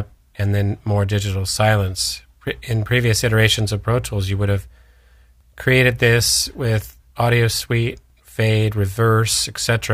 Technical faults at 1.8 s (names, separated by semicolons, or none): none